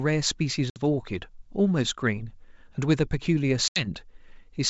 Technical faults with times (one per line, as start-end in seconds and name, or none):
0.70-0.80 packet loss on an ADPCM call
3.68-3.87 packet loss on an ADPCM call